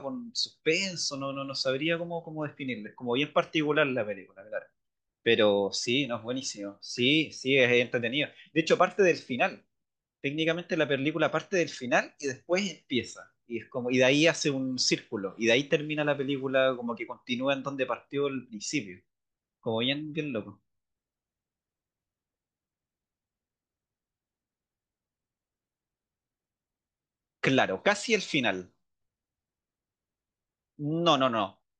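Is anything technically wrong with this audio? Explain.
Yes. At 22.30 to 22.32 s the speech breaks into a brief glitch. This is damaged data in a compressed stream: corrupted bytes make the decoder misread the frames there, lose sync, and skip ahead to the next valid frame header.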